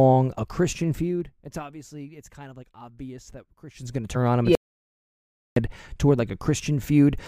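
A speech recording with zipper noise in two places. From 0.51 to 1.86 s the level falls by about 20 dB in 1 dB steps, roughly twenty a second. Each unsmoothed step clicks, giving a ticking texture. From 3.67 to 4.13 s it climbs back about 20 dB in coarser 2 dB steps, with the same zipping. From 4.55 to 5.56 s comes an audio dropout to silence. The sound stops dead for about 1.01 s, with no room tone. The likely cause is lost input while recording continued.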